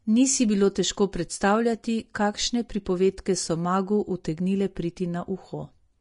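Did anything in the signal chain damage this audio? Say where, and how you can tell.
Yes, at the codec stage. Throughout the speech, nothing sounds above 10.6 kHz. The remaining treble is hissy and grainy, and attacks are blurred. This is likely Vorbis compression, fitting a bitrate near 34 kbps. Coarse quantisation turned fine treble detail into noise.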